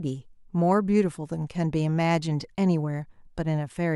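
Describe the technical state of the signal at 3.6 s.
At 3.6 s the signal is intact, with no audible fault.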